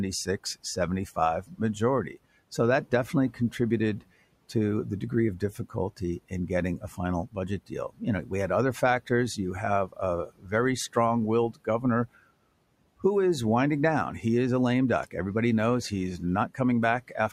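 Speech with room noise about 25 dB below it shows speech cut by the noise suppressor at 0.25–2.58 s (before "that definitely"), 5.4–10.96 s (after "the degree of"), 11.51–11.84 s and 15.9 s to the end. The suppressor mistakes parts of the speech for noise and turns them down by about 15, 18, 19 and 10 dB, for roughly 0.3, 1, 0.15 and 0.2 s of affected sound. On a spectrogram these appear as sudden fades where speech energy drops toward the background. On a waveform the envelope briefly collapses.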